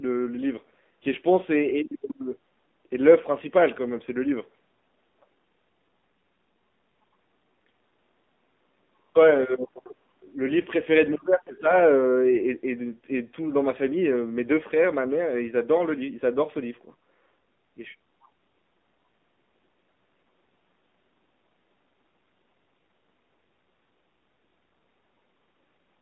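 From start to finish the speech carries the sound of the AMR narrowband mobile codec (AMR-NB). The band is held to roughly 200 Hz to 3.6 kHz, so the voice sits dull and boxed-in like an old phone line. The codec rebuilds speech from a vocal-tract model excited by a few pulses per 5 ms subframe. The plainly audible buzzy, synthetic edge fits a low rate near 7.4 kbps.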